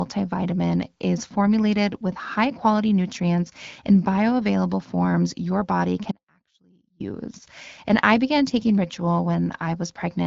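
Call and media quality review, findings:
Audio dropout to a faint residue, 6.12–7.0 s, after "bioavailable forms your body": abrupt 0.88 s loss, faint sound far below normal level; likely upstream feed interruption, path still live.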